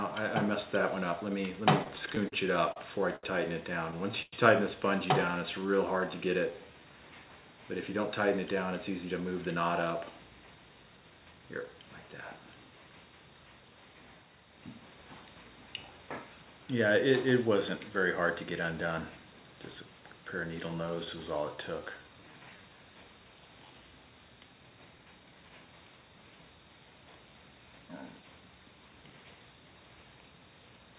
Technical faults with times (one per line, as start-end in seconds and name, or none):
1.84-5.37 repeated stalls (stutter)
5.38-6.93 jitter buffer slow-down
8.90-11.40 jitter buffer speed-up
20.69-21.09 repeated stalls (stutter)
21.56-22.70 jitter buffer slow-down